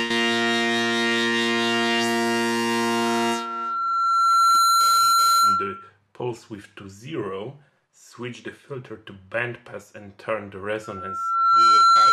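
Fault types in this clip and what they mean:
Loudspeaker feedback squeal: A steady 1.4 kHz tone swells into a squeal standing about 10 dB above the sound, first over roughly a second and a half, later faster. A microphone is hearing its own loudspeaker, and the loop's gain exceeds one at that frequency.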